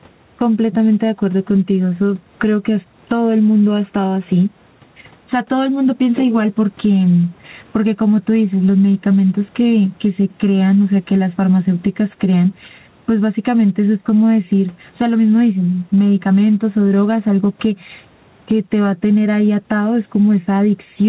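Gain pumping runs through the whole clip. The level swings by about 15 dB, and loud and soft parts end up closer in level, with faint room noise underneath. The likely cause is input gain set far too high, with a fast limiter clamping it down. On a waveform, loud and soft passages sit closer in level than normal speech. A spectrogram shows everything capped at 4 kHz, which fits a G.711 A-law call codec.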